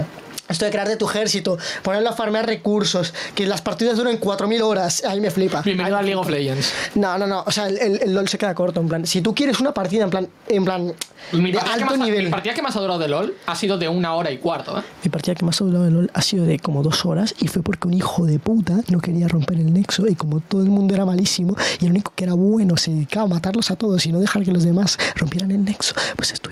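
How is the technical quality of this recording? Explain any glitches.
The recording has one persistent problem. Gain pumping, throughout: the gain swings by around 10 dB, pulled down on each loud sound, likely from excessive input gain and a fast limiter, leaving everything squashed.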